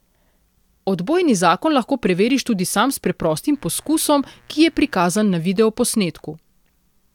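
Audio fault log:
3.55–5.05 s, mains buzz: a steady, raspy buzz sits under the speech for one and a half seconds, well below it in level. Sharp switching spikes at twice the 60 Hz mains rate leak in. Their harmonics climb to several kHz, which gives the rasp.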